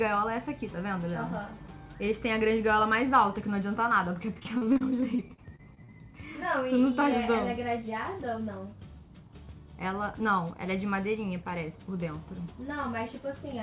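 From 4.34 to 5.90 s the sound turns choppy and robotic: repeated packet loss, with sixteen short gaps, the longest about 41 ms. Each hole is papered over by stretching the preceding sound, which gives the choppy repetition, and about 200 ms is simply absent. On a spectrogram, already bare above 4 kHz from the G.711 call path, the stretch shows smeared, repeated vertical slices and brief dropouts. The waveform shows copied-looking blocks across roughly a fifth of the span.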